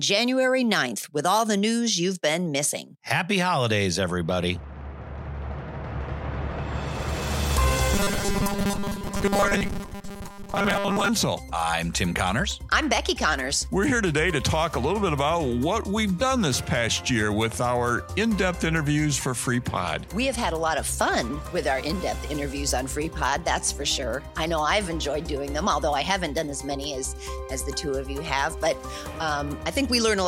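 Robotic sound from repeated short buffers runs from 7.94 to 11.09 s, a rigid metallic buzz at 200 Hz. It is likely caused by audio arriving too slowly, so roughly seven-tenths of this stretch is a 5 ms chunk played over and over while the real sound is skipped.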